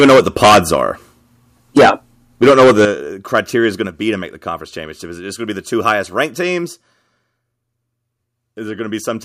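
From the first moment to 0.76 s the speech is harsh and crackling, with peaks pushed about 16 dB past full scale and roughly a fifth of the samples flattened. The same gritty edge returns at 1.76–1.91 s (about 14 dB over, around two fifths of samples cut) and at 2.42–2.85 s (about 13 dB over, close to a third). This is microphone overload, likely from an input gain set so high that the loudest syllables drive the converter beyond its limit. On a waveform the peaks are sliced into flat plateaus, and a spectrogram shows bright vertical smears of added high-frequency distortion.

At 2.85 s, right where the third burst ends, the whole signal, speech and background together, drops by about 10 dB in one instant step. This is the microphone volume stepped down, likely by the call software reacting to the clipping. A waveform shows the envelope abruptly narrowing, and a spectrogram shows all bands dimming at once.

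Milder overload follows at 3.35–3.39 s, about 3 dB over with only a couple of percent of samples clipped. A second step down of about 3 dB comes at 3.87 s. A last brief overload at 5.88–5.91 s is about 2 dB over, again with a couple of percent clipped, showing only faint flat tips on the waveform.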